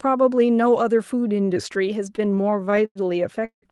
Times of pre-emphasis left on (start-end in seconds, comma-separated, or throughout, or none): none